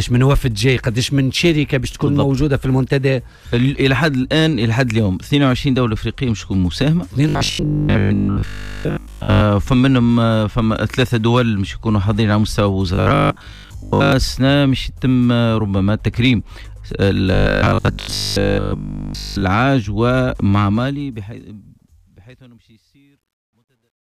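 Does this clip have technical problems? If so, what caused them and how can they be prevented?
Yes. Robotic sound from repeated short buffers occurs at 7.29–9.43 s, 12.94–14.12 s and 17.34–19.44 s. A rigid 50 Hz buzz replaces most of the sound. This likely comes from a 20 ms buffer being replayed while fresh audio arrives too late. Larger buffers and a stable audio thread prevent this.

Truncation distortion on a fade runs from 20.53 to 24.11 s, during the fade-out. The fade keeps only 11 bits, so the tail turns gritty, worst from 22.21 s onward. Processing the fade at higher bit depth and dithering the output prevents it.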